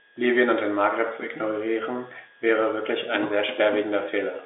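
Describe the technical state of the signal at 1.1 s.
At 1.1 s the audio is intact, with no fault at that moment; the speech carries the narrow, telephone-like character of G.711 coding, with nothing heard above about 3.8 kHz.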